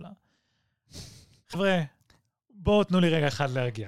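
A likely broken MP3 bit reservoir in this speech clip: after frames were lost, the next frame reached back for borrowed data and decoded the wrong bytes. The sound jumps ahead with a brief garbled glitch from 1.53 to 1.55 s, about one 24 ms frame long.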